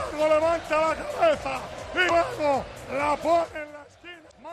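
Damaged data in a compressed stream causes two brief glitches, at 2.05–2.11 s and 4.27–4.33 s.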